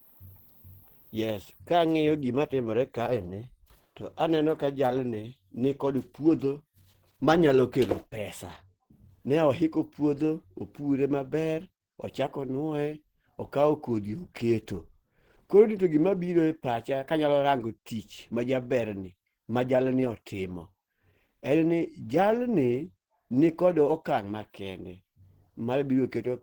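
Speech throughout sounds hoarse, grainy and muffled, with content reaching about 20.1 kHz, likely from Opus compression in hybrid speech mode at a rate near 16 kbps.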